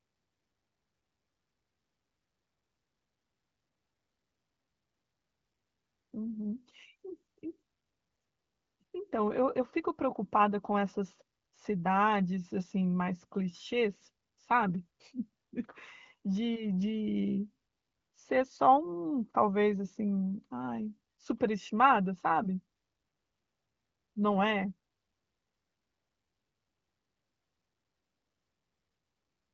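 No technical faults are audible.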